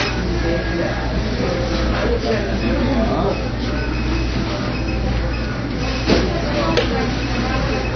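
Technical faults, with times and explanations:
Throughout: low-bitrate audio saved at a high bitrate. The audio was likely squeezed through a very low-bitrate codec, around 24 kbit/s, before being re-saved as a 320 kbit/s MP3. The re-encode can't restore what was lost, so nothing survives above 6.5 kHz and the sound stays dull and band-limited.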